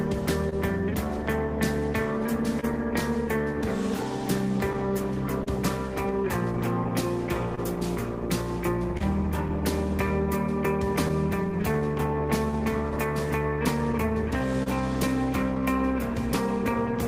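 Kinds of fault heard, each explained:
Clock drift between sender and receiver: the sender's clock runs about 1.5% slow, so the buffer keeps draining and short pieces get repeated, causing uneven timing hiccups throughout.
Short stall from a late packet: at 0.49 to 0.54 s the buffer ran empty, and the sound is held about 25 ms too long before resuming with nothing lost.
Scattered short gaps: about seven small holes between 2.6 and 9.0 s and four between 11.1 and 14.7 s, each up to about 30 ms, are filled by continuing the sound, leaving brief ticks and smears.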